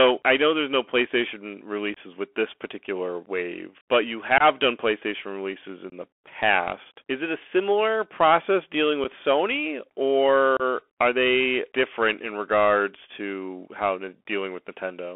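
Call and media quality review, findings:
Hard clipping, whole clip. Harsh fuzz and crackle on every loud syllable. Peaks cut flat at a converter or gain stage driven about 12 dB past full scale. Only a small fraction of samples reach the ceiling, but each flat top throws harmonics up the spectrum, so the distortion lands on the loudest moments rather than on the whole signal.

Bluetooth CVSD headset codec, whole clip. Narrow, boxed-in speech with nothing audible above 3.4 kHz and little below 300 Hz. There is granular hiss under the speech, scratchy s sounds, and plainly audible distortion where loud, bright sounds outrun the adaptive step size. The sound points to the 64 kbit/s one-bit delta coding of the headset voice link.

Unconcealed Bluetooth headset packet loss, five events. There are abrupt holes at 1.94 to 1.98 s, just before "with this particular wave", and at 4.38 to 4.42 s, after "particular wave but you". 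Two more fall at 5.90 to 5.94 s and at 9.04 s, the last after "a similar process dealing". A final hole sits at 10.57 to 10.62 s.

The gaps last 22.5, 22.5, 22.5, 7.5 and 30 ms. Those lengths fit about three, three, three, one and four lost headset packets. Each gap is filled with silence or an idle pattern and the audio returns briefly quieter, consistent with CVSD restarting its step size.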